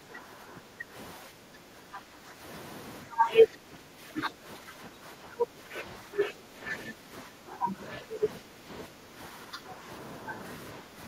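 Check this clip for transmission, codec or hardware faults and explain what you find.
The talker's level is being pulled down in three stretches, consistent with speech suppressed in double talk. From 0.0 to 2.43 s, 3.04 to 9.88 s and 10.8 to 10.99 s the speech dips by roughly 10 dB, and only about 5 dB in the last stretch. The likely cause is an echo canceller that could not tell this talker from far-end loudspeaker echo while both sides spoke and attenuated everything.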